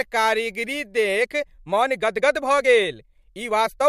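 From 1.02 s to the end, there's a time-stretched section: the speech suddenly runs about 1.41 times faster but keeps its pitch, which sounds rushed. That's likely software squeezing the audio to fit a length by dropping short slices.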